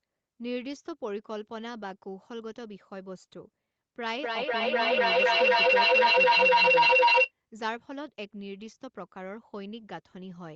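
From 4.16 s to 7.32 s the speech is caught in feedback echo between two devices. A second device in the same room replays this microphone's signal, the microphone picks it up again, and neither echo canceller removes the other device's playback. Each phrase returns at a steady interval of about a third of a second, thinner and more ringing each pass. Because the loop is hot, the repeats build up rather than fading, peaking about 15 dB above the speech itself. The regular, stacking recurrences set it apart from room reverberation, which is a smooth decaying wash, and from a single acoustic echo, which comes back only once. Throughout, nothing is heard above 8 kHz, which fits an Opus call path at around 32 kbps.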